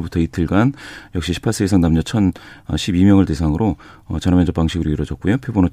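No technical faults are audible.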